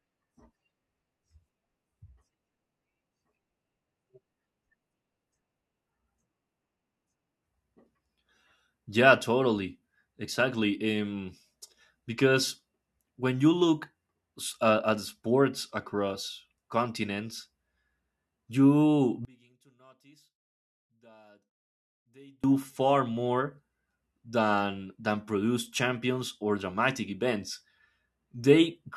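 From 19.25 to 22.44 s the speech collapses by about 33 dB into a faint residue, likely one channel inverted cancelling the centred signal when summed. Unlike a dropout, it never goes fully silent. A difference signal remains.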